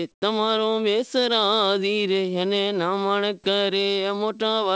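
From 0.12 to 0.22 s the real background drops out and comfort noise in place of the background fills that 100 ms: a flat, featureless hiss about 11 dB quieter than the room around it. The likely cause is the sender's discontinuous transmission pausing on a quiet stretch that sits about 44 dB below the loudest speech.

Right at the end of that gap, from 0.19 to 0.22 s, the speech restarts with its first 30 ms missing. That's an onset clipped by the voice detector, which was likely slow to notice the sound returning. The comfort noise covers those moments, so the speech snaps in abruptly with no soft start. As everywhere in this call-codec audio, nothing reaches above 8 kHz.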